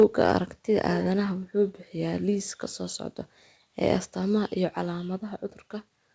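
Right from the start, between 0.00 and 0.32 s, the loudest peaks of the speech carry a harsh, crackly edge, with only a small fraction of samples flattened at the top. This is most likely microphone overload: the input was driven about 2 dB past the converter's ceiling, so the waveform crests were sliced off instead of reproduced. The clipping adds brittle distortion that rides along with each peak.

At 0.03 s, during that same distorted stretch, the speech and the room sound behind it both drop abruptly by about 2 dB in a single step. The likely cause is the microphone volume being stepped down: the call software detected the overloaded input and cut the device gain once, instead of easing it down gradually. The audio arrives through a G.722 call path, so nothing is present above 8 kHz.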